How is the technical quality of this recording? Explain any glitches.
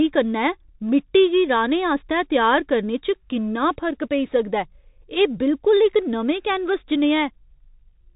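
Technical quality is poor: the whole recording carries the sound of a Bluetooth CVSD headset codec.

From start to finish the speech is confined to a narrow band, with nothing above about 3.8 kHz. The codec tracks the waveform one bit at a time, with each bit saying only up or down while the step size adapts, which fits a 64 kbit/s stream. Loud bright passages outrun the step and distort, sibilants turn scratchy, and a granular hiss sits beneath the speech. That grainy hiss and slope distortion set it apart from a clean telephone-band filter, which would dull the sound without roughening it.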